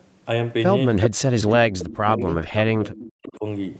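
From 1.54 to 2.29 s, an echo canceller likely mistook double talk for loudspeaker echo and turned everything down. This is speech suppressed in double talk: the voice sinks by as much as roughly 30 dB for about 0.7 s. At 2.29 to 2.33 s, a speakerphone's canceller likely failed to remove all of its microphone pickup, and this echo leak sends back a very faint, brief scrap of voice delayed by 377 ms. From 2.76 to 3.45 s, the same suppression returns, dipping the speech by as much as roughly 25 dB for about 0.7 s.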